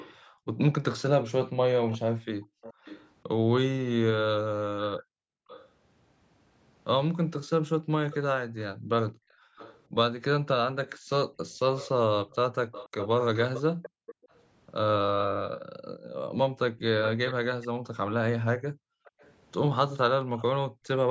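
From the very start until 20.43 s, a faint second copy of the speech trails the original by about 485 ms, sitting roughly 15 dB below it. This is an echo leak, likely from a loudspeaker on the far end whose echo canceller let part of the returned signal through. What sets it apart from ordinary room reverberation is the distinct repeat at a fixed delay, heard as a separate and weaker duplicate rather than a smeared tail.

From 0.23 to 5.48 s, and again from 8.77 to 20.85 s, the room background dips and then recovers. At its deepest it falls by about 40 dB. The dipping adds up to around a second in the first stretch and around a second and a half in the second. This is background gated by the echo canceller, which clamps the microphone hard while the loudspeaker is active. Unlike the echo, nothing extra is added. The ambient floor simply drops away and then returns.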